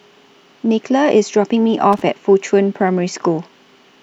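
At 1.93 to 2.02 s, a loose connector crackle: a dirty contact chops the speech, giving an irregular scratchy burst rather than a single clean digital click.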